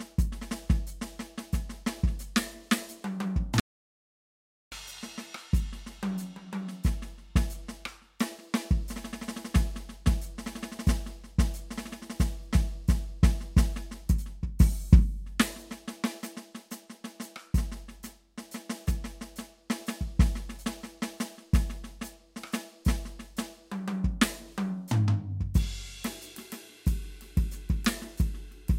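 An audio dropout to silence runs from 3.60 to 4.72 s, cutting the music off mid-flow for about 1.12 s of silence with no room tone beneath it. The input was likely lost, so the recorder kept writing silence until the signal returned.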